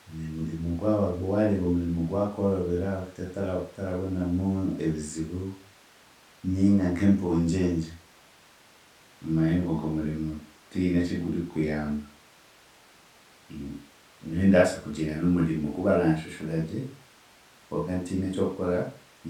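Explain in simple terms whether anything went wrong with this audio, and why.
Nothing went wrong here, as no audible technical fault turns up anywhere in the speech recording.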